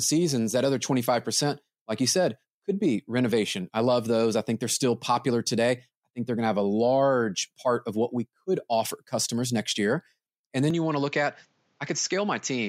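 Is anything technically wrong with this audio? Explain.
Yes. From 10.70 s to the end at 12.69 s, the input likely switched to a poorer device. Nothing above 7.6 kHz remains, so the speech turns duller, drops about 5 dB, and gains a faint new noise floor well below it, with no gap at the switch.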